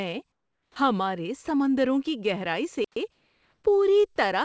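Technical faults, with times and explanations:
0.32–0.76 s and 3.12–3.64 s, comfort noise in place of the background: During both pauses the room's natural background gives way to a smooth, unchanging hiss. It likely comes from discontinuous transmission, where the sender stops sending in silence and the receiver synthesises noise instead. The first patch sits about 11 dB below the real background, which already lies about 55 dB under the loud parts. The second is only about 3 dB quieter. Unlike a simple noise gate, the gap is filled rather than silent.
0.71–0.76 s, onset clipped by the voice detector: The 50 ms just before "ہمارے سمندروں کی گہرائی" stay filled with comfort noise, so the phrase starts bluntly, with no soft rise into its first sound. This is likely because the voice detector reacted late and those opening milliseconds were never sent. It differs from a dropout in the middle of the sound: only the very beginning is missing, right where the hiss hands over to speech.
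2.84–2.96 s, playback stall: Shortly after "ہمارے سمندروں کی گہرائی" the output goes silent for 120 ms mid-flow, then carries on. This likely happens because the player ran short of data or its thread was held up. Unlike comfort noise, the gap is true silence rather than hiss. Unlike a clipped onset, it cuts into ongoing sound instead of a beginning. Throughout, the sound is limited to 8 kHz by the G.722 wideband call codec it passed through.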